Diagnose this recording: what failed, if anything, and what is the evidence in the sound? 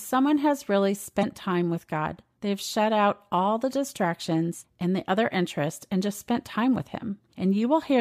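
The failure is in the codec stage: damaged data in a compressed stream. Between 1.19 and 1.24 s the speech breaks into a brief glitch. Corrupted bytes there made the decoder misread those frames, lose sync and hunt for the next valid frame header before normal decoding resumed.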